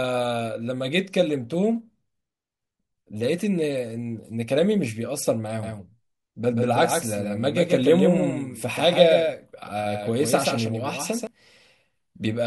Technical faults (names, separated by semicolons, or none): doubled audio track